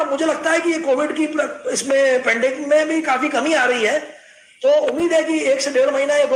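No technical faults can be heard in this audio, so there is nothing to describe in time order.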